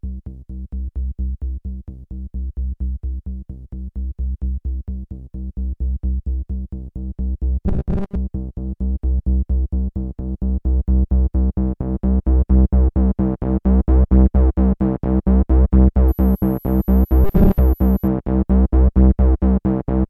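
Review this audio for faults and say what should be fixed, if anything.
From 7.68 to 8.17 s, and again from 17.24 to 17.59 s, the sound turns into a rigid, metallic buzz fixed at 200 Hz, which fits a 5 ms fragment being repeated. This is robotic sound from repeated short buffers, likely from audio arriving too seldom, so that about half of the material is replaced by copies while the real audio is skipped. A constant pitch laid over the sound distinguishes it from plain dropouts or codec warble. Prevent it by giving the audio path a larger, steadier buffer so that playback never has to fill gaps.

From 16.08 to 18.08 s there is a faint high whistle between 11.75 and 11.91 kHz, about 30 dB below the signal. Its pitch drifts within that range. This is switching supply whistle, from a power supply running in an audible burst mode or beating with another supply. Unlike mains hum it sits far above 50 or 60 Hz and has no harmonic ladder, and unlike the buffer buzz it ignores the programme and wanders on its own. 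Prevent it with a better-filtered supply or by separating the equipment's power from the audio circuits.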